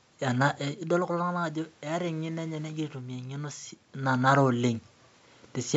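Nothing here points to a technical fault: the room noise in the background and the level shifts around 0.5 s and 3.5 s, where the talker moves relative to the microphone, belong to the recording itself, and the call's microphone processing is behaving as it should.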